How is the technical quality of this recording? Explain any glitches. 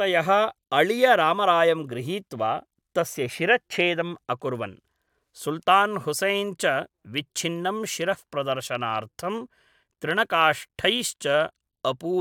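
No technical problems are audible anywhere in the recording.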